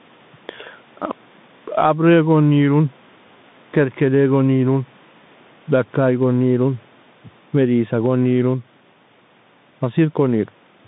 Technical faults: gain pumping; Bluetooth CVSD headset codec

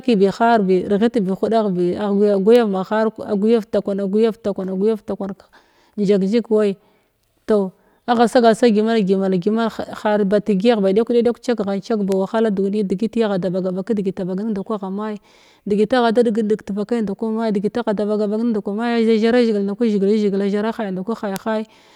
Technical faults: bit error spike

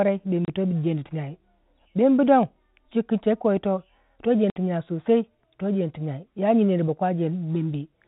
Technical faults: packet loss filled with silence

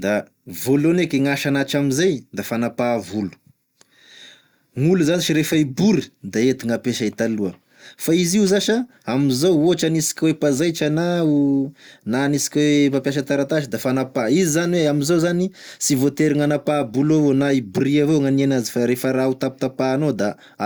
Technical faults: none

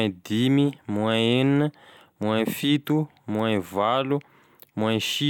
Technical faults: bit error spike

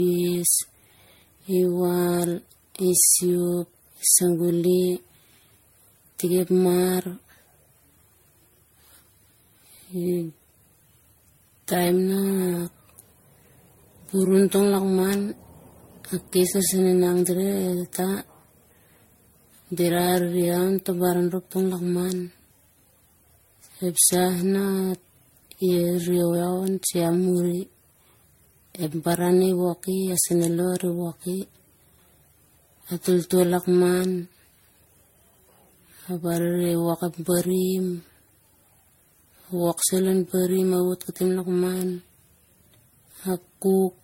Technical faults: generation loss

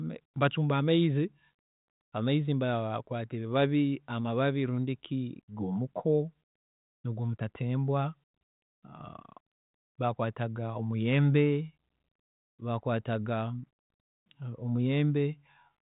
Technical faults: none

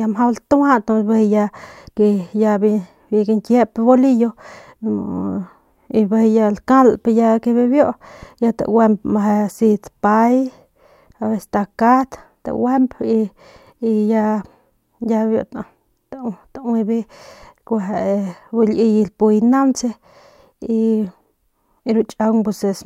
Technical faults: none

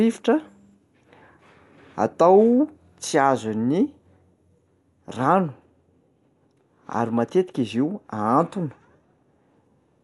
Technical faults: Dolby Digital compression

